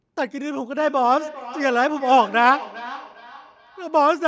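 Feedback echo between two devices runs from 0.77 s to the end. A second device in the room replays the speech, and this microphone recaptures it outside its own echo canceller's reach, so the speech returns roughly every 0.4 s, thinner and ringing, peaking about 16 dB below it.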